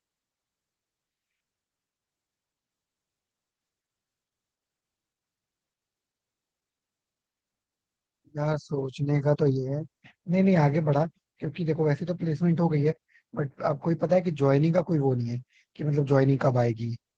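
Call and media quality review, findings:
Opus voice compression, plainly audible, whole clip. Speech hoarse, slightly robotic. Muffled. Points to Opus hybrid mode near 16 kbps. SILK codes the excitation below 8 kHz coarsely. CELT spreads few bits across the fullband top. Fits 20 ms frames.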